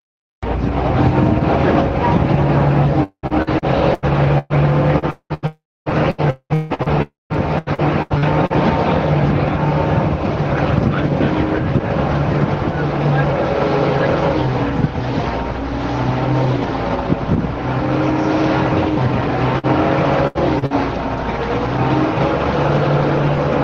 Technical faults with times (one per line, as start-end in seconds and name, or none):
3.03-8.57 repeated packet loss (robotic sound)
5.46-5.89 long network dropout
7.02-7.33 long network dropout
19.58-19.66 burst of packet loss
20.27-20.38 burst of packet loss
20.59-20.65 short concealed packet loss
20.66-20.73 burst of packet loss